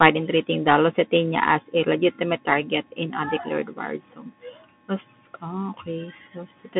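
A Bluetooth CVSD headset codec affects the whole speech clip from start to finish. CVSD sends one bit per sample, each saying only whether the signal steps up or down, and the step size adapts to follow it. The sound here fits a 64 kbps headset link. The band is squeezed to roughly 150 Hz to 3.5 kHz, with nothing above 3.8 kHz, so the speech sounds thin and telephone-like. The coarse stepping adds plainly audible codec damage throughout.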